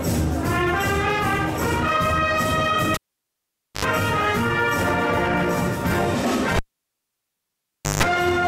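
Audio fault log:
2.94–3.85 s and 6.56–8.03 s, cable pulled and plugged in: each begins with a pop as the live lead comes out, then near silence for about 0.86 s and then 1.42 s. As the plug goes back in, only its tip touches first, giving a 50 Hz mains buzz of 78 ms and then 156 ms. A second pop follows as the sound returns. A plain dropout would simply go silent, without the pops and buzz.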